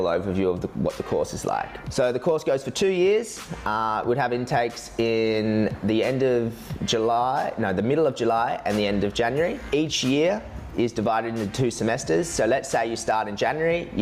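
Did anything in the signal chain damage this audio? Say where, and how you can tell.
Yes: gain pumping, throughout the clip. The level swings by around 15 dB, while loud and soft passages sit unnaturally close in level and the whole thing sounds squashed. This points to the input stage, where the likely cause is gain set far too high for the microphone, with a fast limiter or compressor clamping down on every peak and releasing in the pauses.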